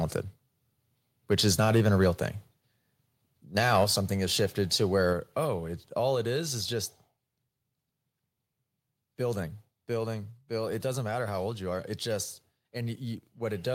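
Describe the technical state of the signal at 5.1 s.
At 5.13 s, between "something has shifted to" and "oh it all it", the speech and the background noise drop together by about 4 dB in a single step: a microphone volume stepped down. The likely cause is call software judging the input too hot and cutting the device's input gain at once. On a waveform the envelope shrinks abruptly at that point and stays lower; on a spectrogram every band, noise floor included, darkens uniformly from that instant onward.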